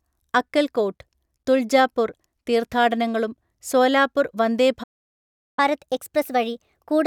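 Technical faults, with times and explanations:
4.83–5.59 s, playback stall: the speech cuts out for about 0.74 s, likely because the player ran dry or its thread got blocked.
5.59 s to the end, catch-up at higher speed: the player races through its backlog at 1.15 times normal speed, so everything sounds hurried and about two semitones sharp.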